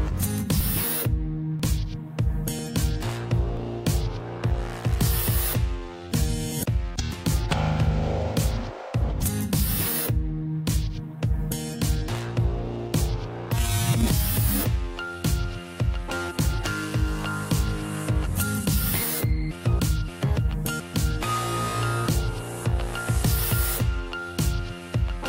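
Audio with overlap between stream segments: tiny skips at 0.61, 1.60, 3.57, 6.52 and 7.50 s, where up to 18 ms is trimmed at 1 s segment joins.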